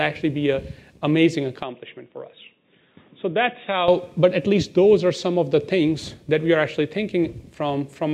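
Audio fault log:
1.63–3.88 s, input switched to a poorer device: the recording likely changed to a lesser microphone without a gap, so the sound dulls above 3.8 kHz, drops slightly, and gains faint background noise.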